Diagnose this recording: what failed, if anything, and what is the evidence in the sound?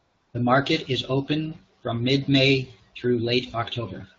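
AMR comfort noise, a call-processing effect of discontinuous transmission, fills 0 to 0.33 s. No speech frames were sent, so the receiver synthesised smooth, steady noise from a coarse level and spectrum description. Unlike a dropout, the gap holds featureless hiss rather than silence, switching off abruptly.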